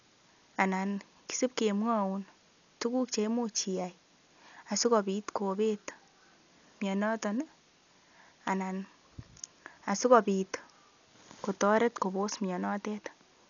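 Speech runs dull from start to finish, with nothing above about 6.9 kHz and a rough, fluttering noise around the vowels, likely heavy Dolby Digital compression at a low bitrate, fitting roughly 48 kbps. On a spectrogram, the energy stops at a flat ceiling with speckled noise filling the gaps between harmonics.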